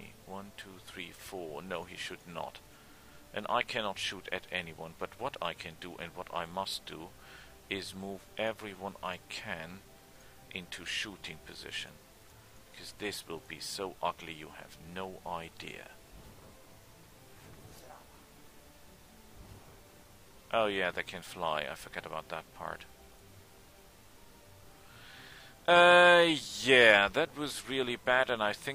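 Nothing technically wrong turns up anywhere in this audio, so there's no fault to pin to a time or trace to a cause.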